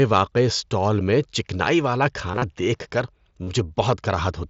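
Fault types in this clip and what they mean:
Concealed Bluetooth headset packet loss: headset-to-phone speech packets went missing, and the receiver filled each gap by looping a matching slice of recent waveform. Scattered gaps over about 105 ms after "اسٹال میں چکنائی والا", and 38 ms after "دیکھ کر", turn briefly buzzy, warbling as speech resumes.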